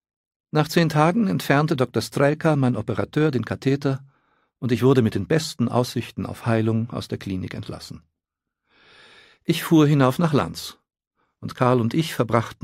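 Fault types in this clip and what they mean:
No audible faults detected.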